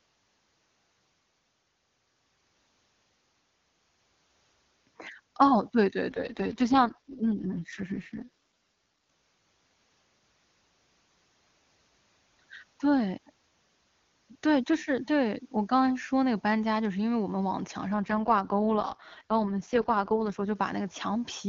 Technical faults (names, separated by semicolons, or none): AMR rate drop